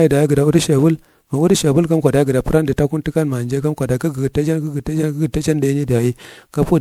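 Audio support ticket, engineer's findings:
Generation loss, throughout the speech: swirly, hollow, smeared attacks. Likely repeated MP3 re-encoding (around ten passes, fits 128 kbit/s), noise and holes compounding. Spectrogram: flickering holes, blurred onsets, nothing above 20.8 kHz.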